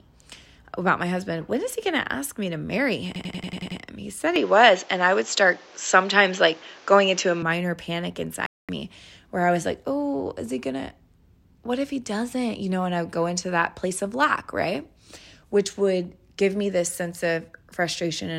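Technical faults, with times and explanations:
3.16–3.81 s, system hang loop: a 93 ms slice repeats seven times at 10.8 Hz, a machine-gun stutter from hardware cycling one stuck buffer, consistent with 4096 samples.
4.36–7.42 s, input switched to a poorer device: the sound turns dull, with nothing above 7.6 kHz, about 5 dB level shift and added noise, likely a lower-quality microphone taking over.
8.46–8.69 s, digital broadcast dropout: the audio mutes for 224 ms, as the receiver silenced output after failing to decode a short run of frames.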